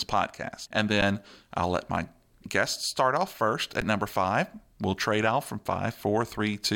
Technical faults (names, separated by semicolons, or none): underrun with held sample